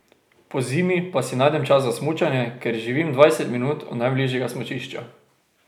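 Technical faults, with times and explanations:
Nothing here stands out as a technical fault; the speech comes through steady and unbroken all the way.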